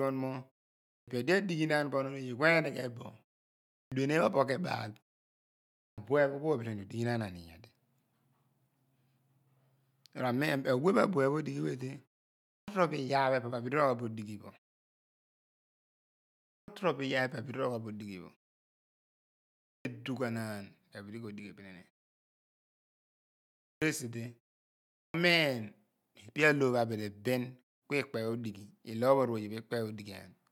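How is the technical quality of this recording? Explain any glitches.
The recording has a repeated clipped start after a pause: eight times, the speech resumes with its onset missing, at 0.93, 3.75, 5.81, 12.52, 16.51, 19.70, 23.66 and 24.99 s. Each follows a gap of 0.5 to 2.0 s. The output path seems to drop into a sleep state during silence and needs roughly 150 to 170 ms to wake, so the first sounds of the next word are swallowed and speech starts abruptly. On a waveform, each of these spots shows flat silence ending in a hard vertical edge instead of a gradual rise. A spectrogram shows energy appearing at once across the band, with no soft consonant onset. The silences themselves go fully quiet, as expected when the output mutes during pauses.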